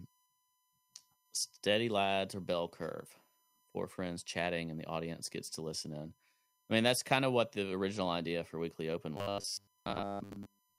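A steady USB whine sits under the speech from start to finish: a fixed-pitch tone at 1 kHz, about 40 dB below the signal. It's the USB bus pulling current in 1 ms frames, and that rhythmic draw bleeds into the audio path through shared power or ground, so you hear the frame rate itself as a pitch. It's quiet.

From 9.17 s to 10.78 s the speech turns robotic, with a hard metallic buzz at 100 Hz locked onto it. It still tracks the shape of the speech loosely, but most of that stretch sounds like a short fragment stuttering in place. The likely cause is audio arriving too late, with the software covering the gaps by looping roughly 10 ms chunks. That loop length is what sets the 100 Hz buzz.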